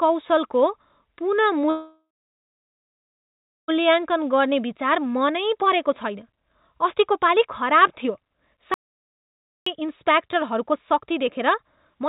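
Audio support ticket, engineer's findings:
Call audio freeze, 1.7 to 3.7 s: last sound carried on as a fading buzz or hiss, then about 1.6 s of silence; audio resumes where it stopped, nothing missing, roughly 2 s delay added. Likely jitter buffer underrun from held-up packets. Spectrogram: smeared, decaying band, then blank gap.

Jitter buffer speed-up, 4.0 s to end: playback runs at 116% speed with unchanged pitch and sounds hurried. The receiver trims short pitch-period chunks repeatedly to shed surplus buffered delay, around a second and a half in total. Waveform: whole cycles dropped, remaining cycles unchanged, no pitch shift.

Audio dropout to silence, 8.74 to 9.66 s: sound cuts out abruptly for 0.92 s and returns mid-flow; silence with no room tone, so content in the gap is lost. Likely a dropped input or link. Waveform: flat line. Spectrogram: fully black column within the 4 kHz narrowband.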